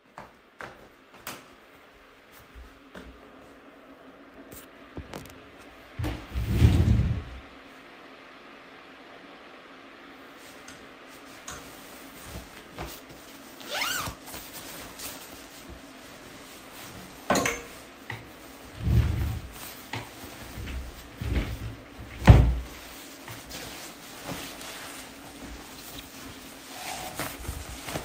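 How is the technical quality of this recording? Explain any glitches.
No glitches or technical faults can be heard anywhere in this recording of sounds; the signal stays continuous and stable throughout.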